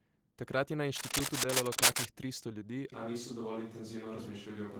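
The whole clip carries Opus voice compression, plainly audible as muffled, slightly hoarse and robotic speech, which fits hybrid-mode coding at a bitrate around 16 kbps. Right after "je na", from 0.95 to 2.05 s, there's cable scratch noise: dense, uneven rustling that sits noticeably above the speech, likely from a worn cable or connector being moved. At 2.92 s it sounds like a switch to a distant microphone through to the end. The voice suddenly turns roomy and hollow with thinner bass, at about the same level, and a faint bed of room noise now sits well below it.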